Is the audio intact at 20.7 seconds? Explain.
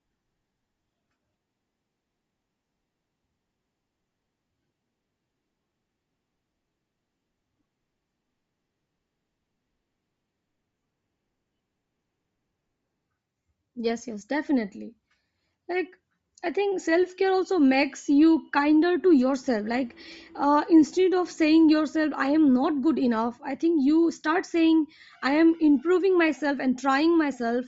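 No, not really. At 20.7 seconds the speech carries the same compression damage heard across the whole clip, and it's most likely Bluetooth LC3 compression. The sound has a breathy, grainy edge up top, where the codec has thrown away much of the upper spectrum and filled it back in with noise. The damage is plainly audible, and it fits a low-bitrate LE Audio link, something around 32 kbps with short 7.5 ms frames.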